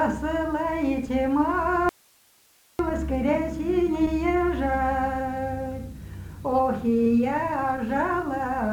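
At 1.89 s the sound cuts off abruptly and, until 2.79 s, leaves only a thin bed of hiss, roughly 35 dB below the signal, before snapping back. This audio dropout to a faint residue likely comes from the signal being lost while the downstream path stayed live.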